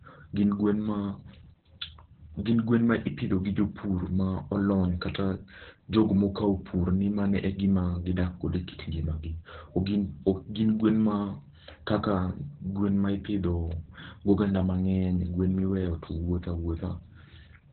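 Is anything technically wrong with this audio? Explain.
Yes. The speech carries Opus voice compression throughout, and the damage is heavy. Nothing sits above about 4.2 kHz, so the band is narrowband. The voice sounds muffled, hoarse and slightly robotic. This points to the SILK linear-prediction coder running at a very low rate, around 8 kbps. At that rate it models the vocal tract and codes the excitation coarsely. A simple low-pass filter would dull the sound in the same way but would not add this rough, synthetic texture.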